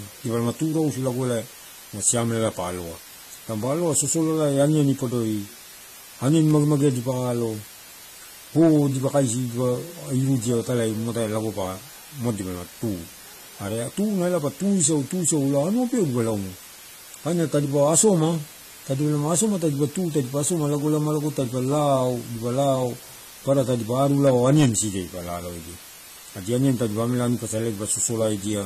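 A speech recording with a steady, even hiss running the whole way through, only about 20 dB under the voice. That's low bit depth with dither, and it sounds like roughly 6 bits. It's also dull and smeared, with a fizzy, warbly edge on sibilants and nothing above 14 kHz. That's most likely AAC compression, consistent with AAC-LC at around 32 kbps.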